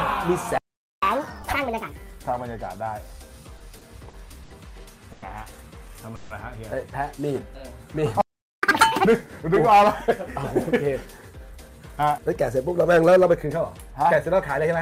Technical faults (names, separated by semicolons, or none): playback stall; catch-up at higher speed; repeated stalls (stutter); call audio freeze; jitter buffer speed-up